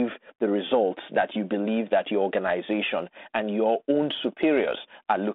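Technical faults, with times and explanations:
No technical faults are present in this speech, which carries a 32 kbit/s G.726 ADPCM telephone path limited to roughly 200 Hz to 3.6 kHz.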